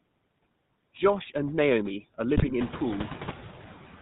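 Noise suppressor artifacts run through the whole clip. The suppressor lowers frequency bands it judges to be steady noise, frame by frame, cutting the background by about 16 dB between phrases. The leftover noise rises under the speech and sinks in the gaps.

GSM full-rate codec coloration is also present throughout and plainly audible. The codec rebuilds the voice from a vocal-tract filter driven by sparse, regularly spaced pulses, which fits the 13 kbps full-rate coder. The voice sounds buzzy and gravelly, with nothing above 4 kHz.

GSM bit errors strike from 2.36 to 2.54 s. Corrupted filter, pitch and gain values reach the decoder over a run of frames, which points to a badly degraded radio link. The speech bends and gargles with squawks and pops for about 0.18 s, just as the room noise steps up by about 13 dB around 2.5 s.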